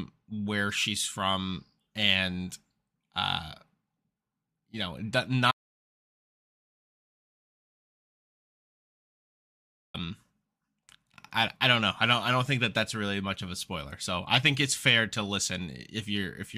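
Audio dropout to silence from 5.51 to 9.94 s, just after "you know": the speech cuts out mid-flow, leaving 4.43 s of dead silence with no room tone. The input was likely lost while the recorder kept writing silence, so that speech is gone.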